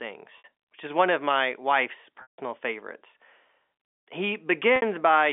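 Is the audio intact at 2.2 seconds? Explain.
No. Packet loss with pitch repetition removes 160 ms, from 2.22 to 2.38 s. The receiver loops the last pitch period, giving a buzzy hold that fades to silence before speech cross-fades back. The waveform shows identical cycles shrinking to a flat gap, and the spectrogram shows frozen harmonics fading out.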